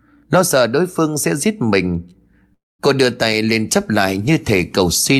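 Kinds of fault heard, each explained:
Long network dropout, 2.53 to 2.81 s: the speech abruptly gives way to a smeared, buzzy continuation of the last sound that fades over a fraction of a second, leaving about 0.2 s of near silence before the talker resumes. Roughly a quarter second of speech is simply gone. The likely cause is a run of audio packets that never arrived, with the receiver stretching out the final sound it had until it gave up.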